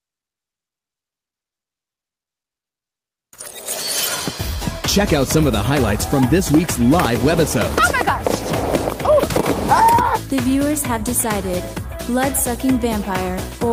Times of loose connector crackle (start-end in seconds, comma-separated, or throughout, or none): none